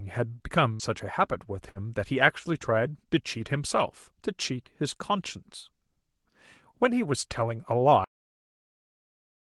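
Burst of packet loss at 0.73–0.82 s and again at 1.69–1.78 s in this speech recording: the receiver stretches the last sound for about 60 ms, fading it, then skips ahead past roughly 60 ms of missing audio. Cut-off end at 8.04 s: the final buffers never play, so the sound stops mid-utterance and drops straight to digital silence. Throughout, the top end stops near 12 kHz, which fits the Opus coding of a call path at about 32 kbps.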